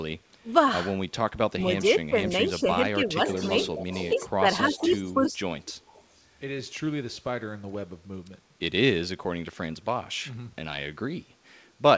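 Speech suppressed in double talk starts at 0.43 s, likely because the echo canceller could not tell the near talker from loudspeaker echo while both sides spoke, and so attenuated everything. The speech dips briefly there, then again from 1.52 to 3.20 s, where it sinks by something like 15 dB in pieces, thinning and cutting out. From 4.12 to 5.35 s it is pushed down again, by roughly 10 dB.

An echo leak overlaps this, likely from a loudspeaker-side canceller letting residual pickup through and sending it back. A copy of the speech trails the original by 259 ms from 3.26 to 4.30 s, about 15 dB below it, and again from 4.74 to 5.13 s, fainter at about 20 dB down. The last trace, from 5.64 to 6.21 s, sits near 30 dB down. The G.722 path's 8 kHz ceiling can be heard throughout.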